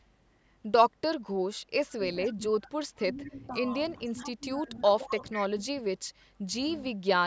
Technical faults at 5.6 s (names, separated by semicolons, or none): speech suppressed in double talk